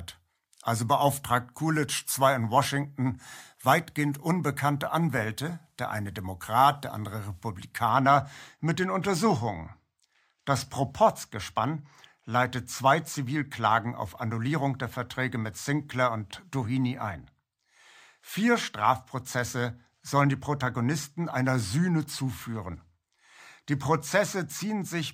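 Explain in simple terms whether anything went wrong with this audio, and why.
From 7.89 s to the end, the speech loses some of its top-end brightness. This is channel delay (comb filtering): one channel arrives a tiny fraction of a millisecond late, and when both are mixed together, their shared sound cancels in a notch around 10 kHz.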